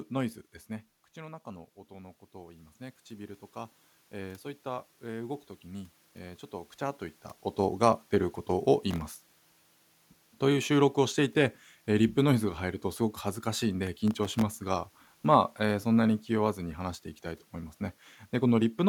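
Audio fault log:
1.15–4.51 s, automatic gain rising: after the input fell by about 13 dB, the gain control gradually added about 6 dB over more than three seconds. Voice and room noise swell together. A talker leaning in would raise the voice while the room noise stayed level.
8.91–10.35 s and 13.87–14.55 s, processor overload crackle: the processor missed many buffer deadlines in a row, and each miss left a tiny silent gap. The gaps are very short, which points to buffers of under a millisecond, so they blur into a gritty tearing over the sound. A single dropout would be one clean hole.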